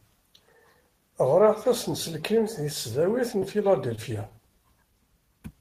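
A speech clip with short concealed packet loss at 3.39–3.44 s and 3.96–3.99 s: about 20 ms of the stream arrived too late each time, and the receiver extrapolated the preceding sound to fill it. On a spectrogram, harmonics stretch flatly or blur into noise before blending back.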